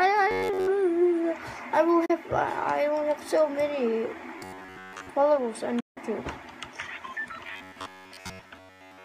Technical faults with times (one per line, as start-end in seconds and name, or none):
0.31-0.67 robotic sound from repeated short buffers
2.05-2.10 digital broadcast dropout
4.39-5.10 robotic sound from repeated short buffers
5.80-5.97 digital broadcast dropout
7.47-9.05 robotic sound from repeated short buffers